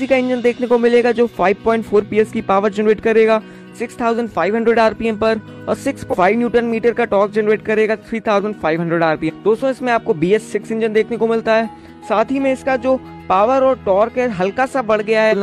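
Damaged data in a compressed stream at 6.09–6.15, 9.25–9.31 and 15.28–15.34 s: short glitches, each about 60 ms, where the decoder lost frame sync.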